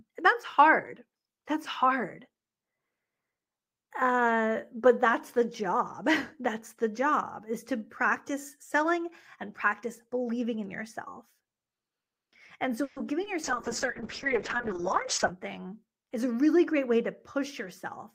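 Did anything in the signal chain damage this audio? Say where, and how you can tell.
Yes. Call audio freeze, network stage, 12.83–13.06 s: the last sound stretches into a fading buzz or hiss for about 130 ms, likely from held-up packets. The spectrogram shows a smeared, decaying band, with no audio lost.

Short concealed packet loss, network and decoder, 13.24–13.28 s: a brief smear or wobble where 20 ms was synthesised from preceding sound. The waveform shows a smooth patch blending back.

Call bitrate drop, codec, 13.44–15.36 s: Opus fell from 32 to 6 kbps. The sound turns muffled and watery, and the spectrogram loses high-frequency content below the normal 12 kHz ceiling.

Jitter buffer speed-up, buffer stage, 15.26–16.18 s, just before "a really great way": about 100 ms of pitch periods were cut, so the sound runs 9% faster at the same pitch. The waveform is compressed in time.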